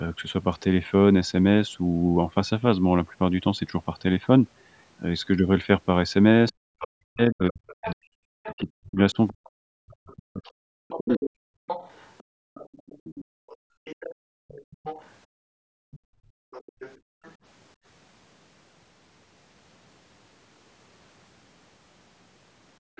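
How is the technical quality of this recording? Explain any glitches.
The recording has clear echo-canceller problems through its middle section and at the very end, with the call band topping out at 8 kHz.

Speech suppressed in double talk, 6.51 to 11.21 s: the talker dips by as much as 40 dB, about three seconds in total, likely because the canceller attenuated both overlapping talkers.

The other side's voice leaking through, 7.68 to 17.34 s and from 22.96 s to the end: a second voice sits roughly 15 dB, then 25 dB, below the talker, likely uncancelled loudspeaker echo.

Background gated by the echo canceller, 11.49 to 17.23 s and 22.79 to 22.96 s: room sound drops by about 34 and 33 dB while the canceller clamps the microphone during loudspeaker playback.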